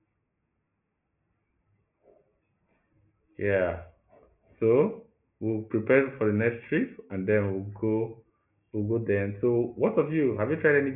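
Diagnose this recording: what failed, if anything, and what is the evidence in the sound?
Nothing failed in this recording, and there is no evidence in the sound of any fault.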